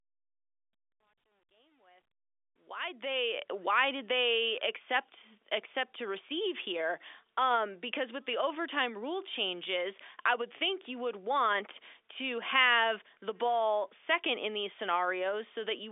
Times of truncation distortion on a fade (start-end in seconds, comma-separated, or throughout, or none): 0.00-3.41